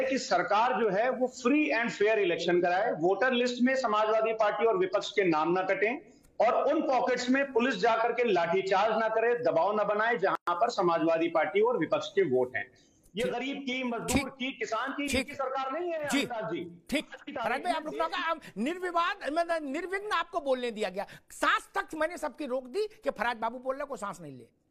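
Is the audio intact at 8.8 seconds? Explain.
Yes, at 8.8 seconds the audio is intact, with no dropout, click, distortion or other fault at that point.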